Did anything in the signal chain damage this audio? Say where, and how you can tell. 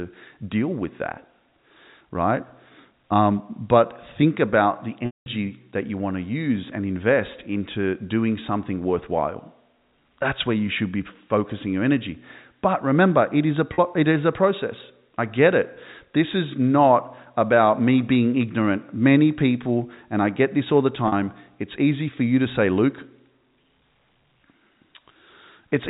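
Yes, network stage: packet loss with pitch repetition. After "but think about the", 5.06–5.26 s is bridged by one repeated pitch cycle, fading into silence. Shorter 40 ms patches sit at 13.74–13.78 s and 21.08–21.12 s. Spectrogram: frozen harmonics. Waveform: identical, decaying cycles.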